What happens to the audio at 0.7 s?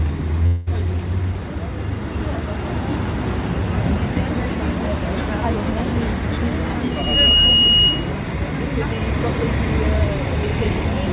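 That's right where the audio comes back from what's likely a long network dropout, running from about 0.46 to 0.69 s. The receiver filled roughly 0.2 s with a fading continuation of the last sound, so the audio resumes with that stretch missing.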